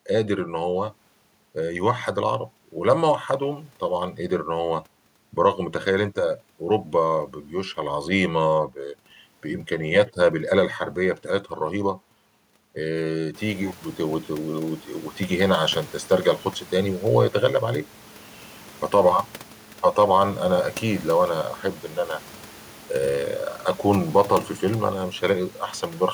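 Nothing in the system's handling of this speech goes wrong; the only change is the room's own background noise, which steps up by about 17 dB a little past the halfway mark, around 13.5 seconds, and still sits about 25 dB under the talking.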